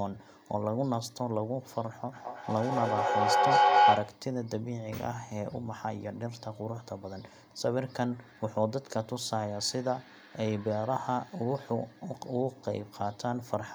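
From 2.12 to 4.27 s a feedback howl builds near 700 Hz, peaking about 9 dB above the speech, its repeats coming every fifth of a second: a bright spectrogram line, a swelling waveform.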